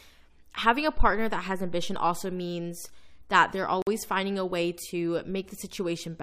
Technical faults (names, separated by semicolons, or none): gap between stream segments